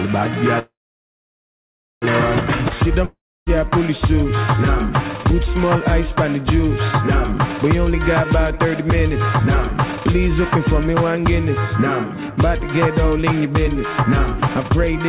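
At 0.59 s the sound trails off into a fading buzz or hiss and then goes quiet for about 1.3 s before resuming at 2.05 s exactly where it stopped. That's a call audio freeze, likely packets held up until the jitter buffer ran dry. Nothing's lost, but about 1.4 s of extra delay gets inserted.

Just after, at 3.05 s, there's another fading tail and about 0.3 s of silence, with audio returning at 3.50 s. This time it picks up further along, so roughly 0.42 s is simply gone. That points to a long network dropout, not a delay.

Later the receiver works off its built-up backlog with jitter buffer speed-up. It trims pitch-period-sized slices over and over, so pitch stays put while the timing runs fast. That happens at 104% from 8.24 to 10.01 s, at 105% from 10.42 to 11.19 s, and at 107% from 11.60 s to the end. The last stretch drops a fifth of a second or so, and from 105% up it sounds hurried. 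Throughout, the G.711 call path keeps everything below 4 kHz.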